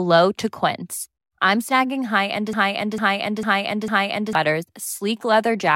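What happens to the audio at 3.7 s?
At 3.7 s the speech is stuck in a broken-record loop: a fragment of about 0.45 s plays over and over, back to back and identical each time, four repeats in all, from 2.53 s to 4.35 s, right after "I'm snagging high end". The most likely cause is a stall in the player, encoder or stream, which kept resending the last piece it held, so the speech that belonged in that span never plays.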